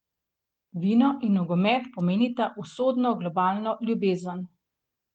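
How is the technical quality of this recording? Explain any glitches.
No glitches to report: the speech runs steady throughout, with the Opus voice compression in hybrid mode at 24 kbps leaving only light coding traces and the band still reaching about 20 kHz.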